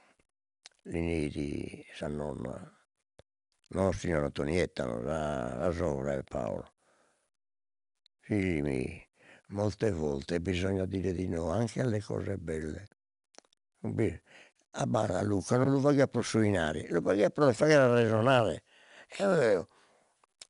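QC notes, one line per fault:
throughout: 4-bit ADPCM compression. Each sample is coded as a coarse 4-bit step from a predicted value, so the quantisation error rides along as gritty broadband hiss that rises and falls with the speech level and is plainly audible on louder syllables. Sharp onsets roughen where the adaptive step lags. The data rate points to about 88 kbps, and the absence of content above 10.6 kHz fits a sample rate near 22 kHz, which dulls the top end.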